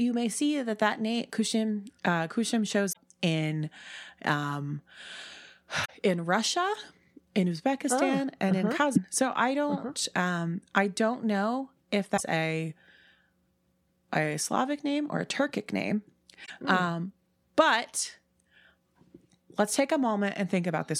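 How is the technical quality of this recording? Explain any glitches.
The speech is interrupted by five short glitches from damaged data in a compressed stream, at 2.89–2.97 s (just before "in um"), 5.81–5.90 s, 8.92–8.98 s, 12.14–12.21 s (right after "I don't know if") and 16.42–16.50 s. In each 58–84 ms span, corrupted bytes leave the decoder misreading frames and losing sync until it finds the next valid header. The result is a brief glitch in the speech.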